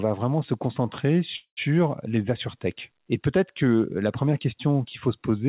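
A call audio freeze runs from 1.36 to 1.59 s, just after "vraiment se concentrer". The last sound stretches into a fading buzz, then about 100 ms of silence, likely from delayed packets draining the jitter buffer. The speech resumes where it stopped, about 0.21 s late, with nothing lost. Over the whole clip, nothing is heard above 4 kHz, which fits a G.711 A-law call codec at 64 kbps.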